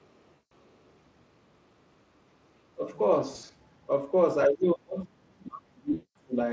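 At 0.33 to 0.53 s, VoIP packet loss concealed by the speech codec: about 180 ms is missing, and the decoder stretches the last pitch into a fading buzz rather than falling silent. At 2.73 to 2.86 s the speech dips by roughly 25 dB for a moment. The likely cause is speech suppressed in double talk, with the echo canceller ducking this side while the far end talks. At 3.29 to 3.51 s the concealment returns as scattered short gaps totalling 140 ms, the longest 60 ms, heard as a stuttering buzz. From 4.47 to 6.36 s the suppression goes much deeper, roughly 35 dB, pushing the speech down for about two seconds. Within that stretch, 5.93 to 6.17 s adds 220 ms of concealment whose tonal, decaying smear marks it as lost packets rather than ducking.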